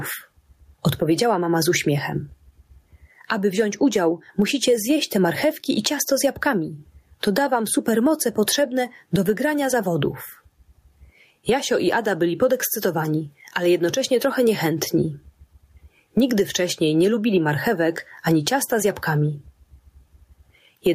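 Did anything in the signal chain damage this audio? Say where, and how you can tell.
Yes. Throughout the clip the gain swings by around 15 dB, leaving everything squashed. This is gain pumping, likely from input gain set far too high, with a fast limiter clamping each peak.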